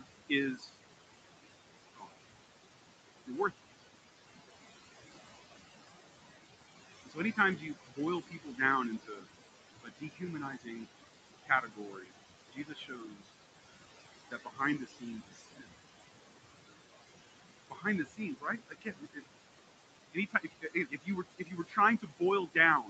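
Noise suppressor artifacts run through the whole clip. The room noise sits about 10 dB below the speech. The suppressor pulls it down by about 20 dB, band by band, frame by frame. So the background drops away in the gaps and comes back under each phrase. The speech stays within a band that stops near 8 kHz.

Speech cut by the noise suppressor happens six times: 0 to 0.77 s, 1.94 to 2.11 s, 3.26 to 3.82 s, 7.06 to 15.7 s, 17.7 to 19.21 s, and 20.13 s to the end. The suppressor mistakes quiet parts of the speech for noise and turns them down with it. The drops reach about 17 to 21 dB. Soft consonants and word endings sound swallowed. The long stretch from 7.06 s affects the most speech, with around four seconds of speech faded.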